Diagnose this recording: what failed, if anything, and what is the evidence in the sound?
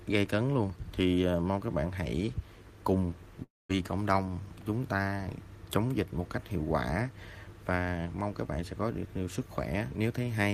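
Around 3.43 s the incoming audio stops and the last sound carries on as a buzzy, fading continuation for about a quarter of a second, ending in near-silence lasting about 200 ms. The sound returns at 3.71 s with that stretch simply gone. This is likely a long network dropout, where the receiver's concealment stretched the final received sound until it ran out. A brief packet-loss glitch would be patched in tens of milliseconds, and a mute or gate would cut cleanly without the decaying buzz.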